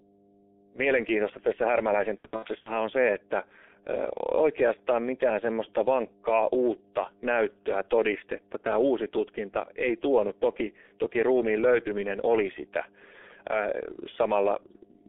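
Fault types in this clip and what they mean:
Mains hum: A ground loop or nearby transformer has let the 50 Hz power line leak into the signal path, so a steady low tone at 50 Hz with a few low harmonics sits under the speech for the whole clip. It runs at about 15 dB below the speech level.
G.723.1 codec: The speech passed through this early internet-telephony codec at 6.3 kbit/s, inside a telephone band of roughly 300 Hz to 3.5 kHz. Its coarse 30 ms frames and slowly updated voice model cause heavy damage here. Everything above the band is gone, the voice sounds muffled and hoarse, and consonants smear into one another instead of landing crisply.
VoIP packet loss concealed by the speech codec: Between 2.19 and 2.74 s, packets failed to arrive. The decoder filled each gap by extending its last pitch and filter settings at falling gain. Eight 30 ms frames, 240 ms in total, went missing across about half a second, the longest run being 60 ms. 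The speech there is stretched into a buzzy tone or coloured noise that fades, and stays weakened for a moment after packets return.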